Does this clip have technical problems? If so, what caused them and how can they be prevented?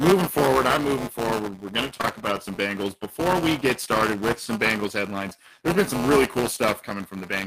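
Yes. Buffer tearing runs through the whole speech clip as a steady robotic buzz at about 200 Hz, which points to a playback period of 5 ms. The writing program and the reading hardware have drifted so that they cross inside every period, leaving roughly a tenth of each buffer holding audio from about one lap earlier, with hard joins on either side. Unlike a mains hum, the buzz disappears in pauses, because it exists only when there is signal to tear. Prevent it by restarting the stream with proper pointer synchronisation and a larger period, so the writer stays safely ahead of the reader.

Short concealed packet loss occurs as two back-to-back gaps, from 1.97 to 2.01 s and from 2.01 to 2.05 s, between "going to" and "about some". About 40 ms of the call arrived too late for the decoder, and the receiver extended the preceding sound before blending back into real audio. The result is a brief smear and wobble rather than a click or silent dropout, which separates it from a plain dropped buffer. 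Prevent it with a deeper jitter buffer and forward error correction on the network path.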